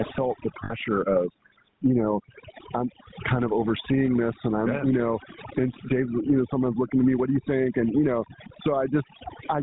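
Right from the start, the speech has the buzzy, gravelly grit of the GSM full-rate codec, and it's plainly audible. The excitation is rebuilt from sparse regular pulses and nothing gets through above 4 kHz, so the top end is dull and the texture rough, as you'd expect from the 13 kbps full-rate coder.

Layered on that throughout is overdone noise removal. The reduction was pushed so hard that bands near the noise estimate get gated out along with quieter parts of the voice. The gaps sit in near silence with little twinkling specks.

There's also gain pumping across the whole clip. The gain swings by around 15 dB, pulling loud and soft parts closer in level and leaving everything squashed. That's likely a fast limiter clamping down on a mic gain set far too high.

At 0.64 to 0.72 s, right after "felt the" and before "of you know I'm", lost GSM frames leave about 60 ms of sound, which fits three dropped frames. 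The decoder repeated the last good frame, so the gap comes out as a short, rough metallic ring rather than clean speech.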